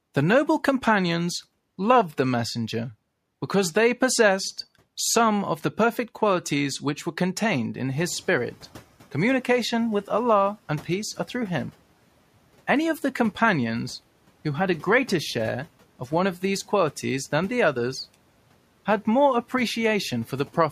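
From 7.92 to 8.63 s the noise suppressor is catching up. Its estimate lags rising room noise. Noise leaks through, then sinks about 7 dB.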